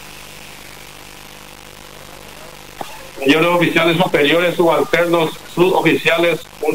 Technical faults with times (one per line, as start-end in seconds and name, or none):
0.00-6.75 low bit depth without dither